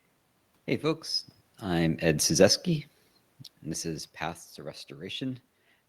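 From 1.64 to 3.05 s, automatic gain falling: judging the input too loud or its background noise too strong, the control lowers gain by about 3 dB, so speech and room noise sink together before "and this is". The waveform envelope tapers and the spectrogram's noise floor dims in step.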